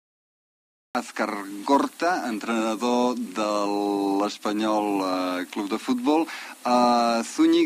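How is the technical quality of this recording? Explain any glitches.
There is one glitch, at the very start. Cut-off start, 0.0 to 0.95 s: the capture began late, so the first 0.95 s is digital silence. The sound then appears abruptly at 0.95 s, already partway through, with no natural attack or fade-in.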